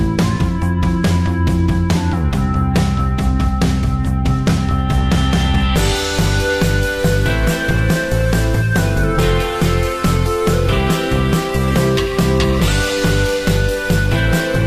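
Adaptive stream at a lower bitrate from 9.06 s to the end: the player abruptly switches, without a gap, to a leaner encoding. Treble cuts off above 14.9 kHz and codec artefacts thicken.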